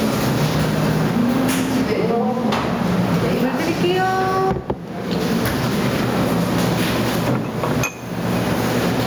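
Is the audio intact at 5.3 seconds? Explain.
No. At 5.3 seconds the audio shows gain pumping, which runs through the whole clip. The level visibly breathes: the gain ducks by roughly 15 dB under each loud sound, leaving everything squashed toward one level. The likely cause is input gain set far too high with a fast limiter clamping down on every peak. Unlike a dropout or noise gate, the sound never cuts out. It rises and sinks with the loud events.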